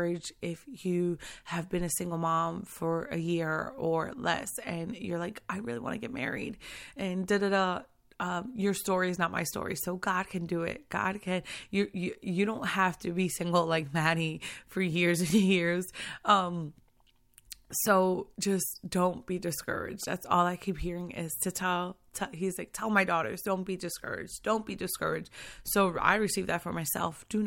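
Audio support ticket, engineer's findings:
No audible faults found in this speech recording.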